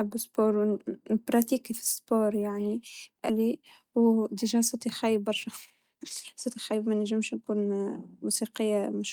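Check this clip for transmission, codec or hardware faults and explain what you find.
Two kinds of fault are audible: one skip ahead and three stretches of jitter buffer speed-up.

Skip ahead, 3.29 to 3.31 s, right after "بهذي يعني": about a second of queued speech was dropped, and playback jumps straight to later audio. The join is nearly seamless. Unlike a dropout, there is no silence or fill, just missing content.

Jitter buffer speed-up, 3.39 to 5.49 s (109%, about 200 ms removed), 5.91 to 6.05 s (155%, about 70 ms), and 6.46 to 8.28 s (113%, about 300 ms): the receiver trimmed repeated pitch-period slices to drain excess buffered delay. Speech sounds hurried, and pitch stays unchanged, which separates it from a resampling error.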